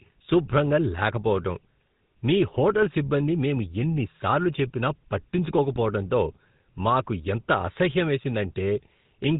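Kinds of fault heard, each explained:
GSM full-rate codec: throughout the speech there is a plainly audible buzzy, gravelly roughness, because the vocal tract is modelled and excited by sparse, regularly spaced pulses, which fits 13 kbps GSM full rate. A spectrogram shows nothing above 4 kHz and grainy, smeared harmonics.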